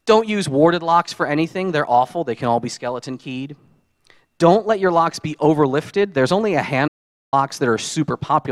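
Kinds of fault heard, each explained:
Audio dropout to silence: the input signal was most likely lost for a moment, through a link failure or an accidental mute, while recording carried on writing zeros. From 6.88 to 7.33 s the sound cuts to dead silence for about 450 ms, with no room tone, then resumes mid-flow.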